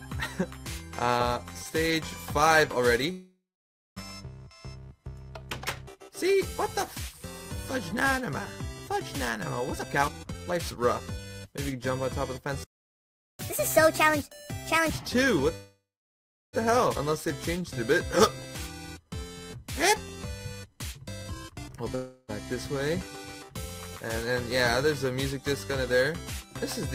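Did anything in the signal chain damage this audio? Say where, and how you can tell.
Yes. Several faults sit in the network and playback buffering stages.

Call audio freeze at 3.11–3.98 s, 15.56–16.55 s and 21.95–22.31 s: the last sound is stretched into a fading fill, which decays to silence for about 0.58 s and 0.72 s in the first two and only briefly in the third. Delayed packets most likely drained the jitter buffer. Nothing is lost, and playback resumes where it stopped. That sets it apart from a skip.

Jitter buffer speed-up at 9.72–11.73 s, running at 142%, and at 21.22–21.90 s, running at 144%: the sound hurries but its pitch stays put. That marks the removal of short pitch-period slices after a burst of late packets, roughly a second and about 0.3 s respectively. A resampling speed-up would raise the pitch instead.

Playback stall at 12.64–13.39 s: the output cuts to dead silence for about 0.75 s mid-flow, likely because the player ran dry or its thread was blocked. 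No decaying fill bridges the gap, which distinguishes it from the network freezes.

Catch-up at higher speed at 13.39–14.90 s: immediately after the stall, playback runs at 1.5x with pitch raised about seven semitones, then snaps back. The player is resampling its backlog to recover the lost time. The shift in pitch shows this is not a pitch-preserving buffer speed-up.

Skip ahead at 16.95 s: playback jumps forward with essentially no gap, and roughly half a second of audio is gone. The two sides are spliced almost directly. This is dropped audio rather than a pause, the opposite of the freezes where nothing was missing.

Jitter buffer slow-down at 17.10–20.79 s: the audio drags slightly, at 97% speed with pitch unchanged. Repeated pitch periods or bits of pauses add 107 ms in total as the buffer rebuilds its reserve. It is gentle and spread out, unlike an abrupt freeze.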